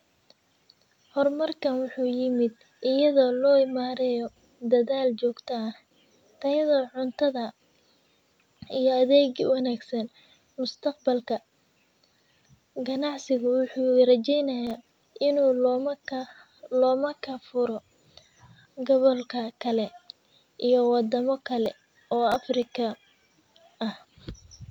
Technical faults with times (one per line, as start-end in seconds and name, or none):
14.67-15.08 processor overload crackle
21.66-22.62 processor overload crackle